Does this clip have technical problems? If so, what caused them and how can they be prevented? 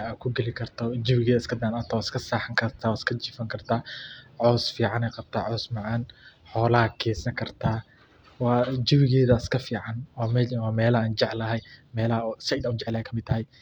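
Yes. From 11.4 s to the end at 13.62 s the speech suddenly rushes forward at about 1.35 times its earlier pace while the pitch stays put: a time-stretched section. The likely cause is software squeezing that stretch to fit a set length, keeping the pitch by dropping short slices of audio. Prevent it by editing or re-recording content to fit the slot instead of forcing it with time compression.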